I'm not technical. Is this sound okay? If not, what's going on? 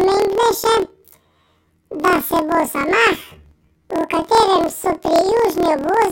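No. This is a case of planar audio read as interleaved, throughout the clip: stereo stored as separate left and right blocks got read as alternating pairs. The speech sounds an octave high, with a rough buzz repeating about 38 times a second.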